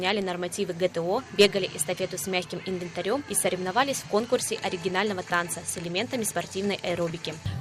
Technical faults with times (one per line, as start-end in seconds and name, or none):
0.00-7.60 clock drift between sender and receiver
0.15-7.55 repeated timing corrections